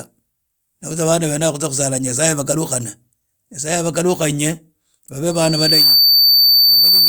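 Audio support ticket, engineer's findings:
Loudspeaker feedback squeal from 5.31 s to end of clip. Single 4.6 kHz tone swells over roughly half a second, then sits about 5 dB above the speech. Probable component: mic picking up its own loudspeaker. Loop gain exceeds unity at 4.6 kHz.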